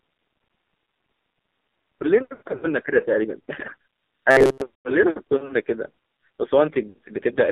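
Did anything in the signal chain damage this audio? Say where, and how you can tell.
Yes. The damage sits at three stages: the codec, the radio link, and a buffer in the playback path.

The whole 8-second speech clip carries the AMR narrowband mobile codec. The band runs only from about 250 Hz to 3.7 kHz, with nothing above 4 kHz, and the coding damage is heavy: the voice is buzzy and synthetic, typical of a low-rate mode that fits roughly 5.9 kbps. At that rate the vocal-tract model and its sparse pulse excitation cannot carry fine spectral detail, so timbre collapses toward a generic, reedy sound.

Lost AMR speech frames appear twice. From 2.34 to 2.67 s the sound stalls, warbles and thins in patches scattered over about 280 ms, with the longest dropout near 80 ms. The pattern fits roughly eight failed 20 ms frames that the decoder concealed by reusing the last good pitch and filter settings at falling gain. 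A shorter dip at 6.90 to 6.98 s matches about three lost frames. Each recovery is briefly weak and rough.

Robotic sound from repeated short buffers occurs between 4.31 and 4.62 s. Across most of that stretch the speech turns into a rigid metallic buzz at 133 Hz that only loosely tracks the underlying contour. A fixed buzz at that frequency corresponds to a period of about 7.5 ms, so the likely cause is a starved buffer replaying its last 7.5 ms block while the real audio was skipped.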